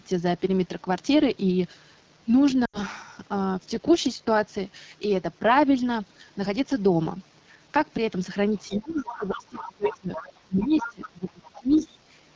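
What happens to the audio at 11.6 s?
At 11.6 s the speech sits inside a stretch of speech suppressed in double talk, from 10.41 to 12.07 s. It dips by up to around 25 dB, likely because the echo canceller ducked the talker while the far side spoke. That makes it a gain drop, not a codec dropout. Overlapping it, the other side's voice leaks through from 11.47 to 11.88 s as a second voice about 15 dB under the speech, likely uncancelled loudspeaker echo. Underneath, the AMR wideband (HD Voice) codec at 8.85 kbit/s keeps everything rough and raspy.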